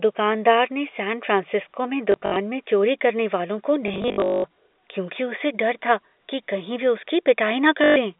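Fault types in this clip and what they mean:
Packet loss with last packet repeated: lost packets were filled by replaying the previous one, so near 2.1, 3.9 to 4.4 and 7.8 s the sound stutters with a 50 Hz buzz.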